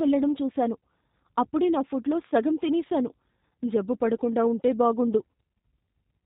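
G.729 codec coding runs through the whole clip. Nothing above 4 kHz survives. The speech sounds rough and synthetic, which fits an 8 kbit/s G.729A stream.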